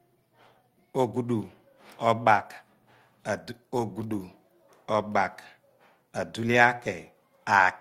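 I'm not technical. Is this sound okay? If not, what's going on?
Yes, the recording comes through steady and intact, with nothing in the signal itself that goes wrong at any point.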